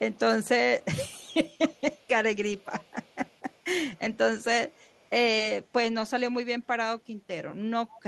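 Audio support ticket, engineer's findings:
Echo leak at 0.11–0.48 s, 0.8–2.08 s, 2.57–3.6 s, 3.96–5.09 s and 7.91–8.01 s. Faint copy of the speech trailing by 264 ms, roughly 25 to 40 dB below it. Likely far-end loudspeaker pickup left in by that side's echo canceller and sent back.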